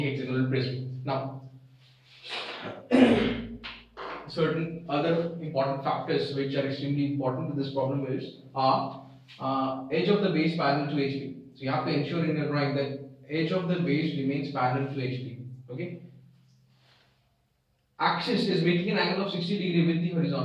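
No technical faults can be heard anywhere in the recording. Nothing drops out, breaks up or distorts at any point.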